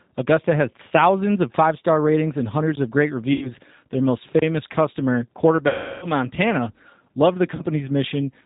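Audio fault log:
throughout: G.729 codec. The sound is band-limited to below 4 kHz and has a plainly audible rough, synthetic edge, which fits an 8 kbit/s G.729A stream. The decoder rebuilds each 10 ms frame from a vocal tract filter, a pitch predictor and a few coded pulses. The fine detail of the real waveform is lost. This gives the speech a buzzy, slightly artificial texture, and nothing above 4 kHz comes through.
3.33–3.52 s, 5.68–6.06 s and 7.55–7.62 s: VoIP packet loss concealed by the speech codec. About 80 ms, 340 ms and 40 ms of audio went missing. The decoder filled each gap by repeating its last pitch and filter settings at falling gain, so the sound smears into a fading buzzy tone or coloured noise. The 340 ms gap is the longest. Each frame depends on the one before, so the speech stays weak and distorted briefly after each gap ends.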